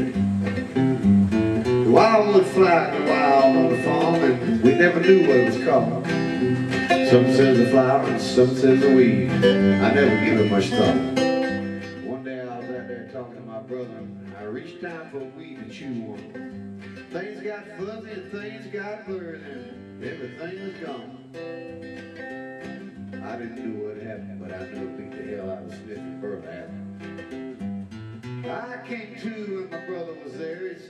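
From 10.98 to 12.16 s there's zipper noise: the level drops by roughly 15 dB in coarse, unsmoothed steps, around thirty a second, and each jump leaves a tiny click, so you hear a fast ticking riding on the sound.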